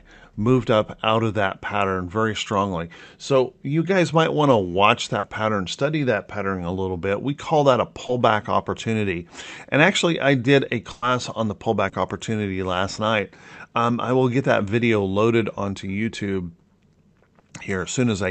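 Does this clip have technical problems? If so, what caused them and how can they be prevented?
Yes. Through an Opus call path whose high end stops near 8 kHz, there are two kinds of packet-loss faults.

Short concealed packet loss occurs at 5.19 to 5.24 s (40 ms), 8.06 to 8.09 s (20 ms), 11.89 to 11.93 s (30 ms) and 17.39 to 17.43 s (30 ms). In each, a few lost hundredths of a second were patched by extending the preceding sound. The result is a brief smear or wobble. A larger jitter buffer or in-band forward error correction would prevent it.

A burst of packet loss runs from 10.92 to 11.03 s. About 100 ms went missing, and the decoder stretched the last sound into a decaying buzz or hiss before the audio resumed further on. It differs from the short losses by its length and audible fade. Redundancy or retransmission on a steadier network would prevent it.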